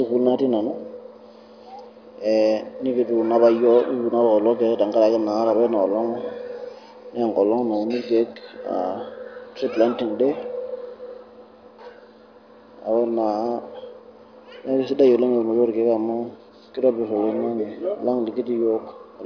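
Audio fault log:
No faults are logged for this speech clip.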